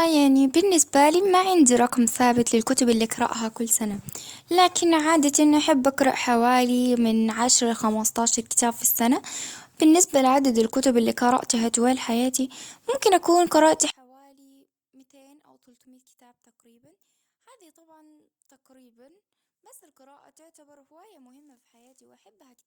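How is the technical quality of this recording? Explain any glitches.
The recording has one clear glitch in its final stretch. One channel inverted, from 13.9 s to the end, after "حياتي ممكن أكون قرأت": the speech collapses by about 36 dB, likely because one channel's polarity is reversed, so the shared centre content cancels when summed.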